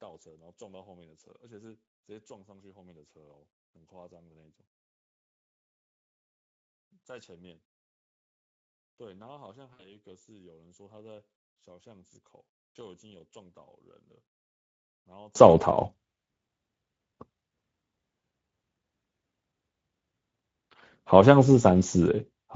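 Speex codec damage runs through the whole speech clip. The sound is noisy and hoarse, with a grainy edge. The encoder has too few bits for the excitation signal. The damage fits a bitrate near 17 kbps.

From 0 to 15.35 s the speech almost disappears. It drops by about 34 dB, leaving a faint residue. The likely cause is one channel inverted in polarity, so the shared centre content cancels when the channels sum to mono. Full level returns after 15.35 s.

From 9.73 to 9.88 s there is VoIP packet loss concealed by the speech codec. About 60 ms of audio is missing, which points to three lost frames. The decoder stretches its last sound into a buzzy tone or coloured noise that fades. The distortion persists briefly after packets return.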